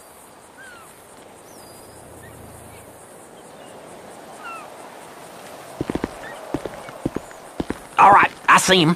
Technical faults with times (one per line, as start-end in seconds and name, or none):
1.17-1.19 skip ahead
1.27-2.37 jitter buffer speed-up